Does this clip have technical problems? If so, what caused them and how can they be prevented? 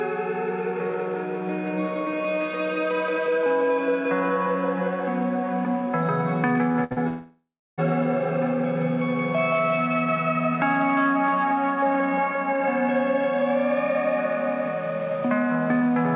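Yes. Short concealed packet loss hits at 6.72 to 6.76 s and again at 6.92 to 6.98 s, on a G.711 mu-law call path with nothing above 4 kHz. About 20 ms, then 40 ms, never arrived in time. The receiver stretched the preceding sound over each hole, so you get a quick smear before the real signal picks back up. Forward error correction or a slightly deeper jitter buffer would cover gaps this small.

A burst of packet loss sits between those two, at 6.84 to 6.92 s, with about 60 ms missing in one run. The decoder carries the last sound forward and lets it fade, so you hear a held buzz or hiss, and then the audio jumps ahead with that slice gone. Sending redundant copies of each frame in later packets would stop a short run of losses from wiping out consecutive frames.

From 7.08 to 7.80 s the sound falls away. A fading continuation of what came before is followed by about 0.34 s of silence, and the audio comes back further on with roughly 0.7 s of material gone. 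That's likely a long network dropout, where nothing got through for the whole stretch. A steadier connection, such as wired instead of Wi-Fi, is the real fix here.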